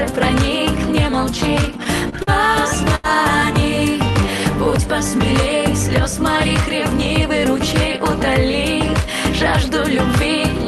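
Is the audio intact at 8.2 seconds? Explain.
Yes, the audio is intact at 8.2 seconds, with nothing there beyond the ordinary coding character and upper band limit of the call path it passed through.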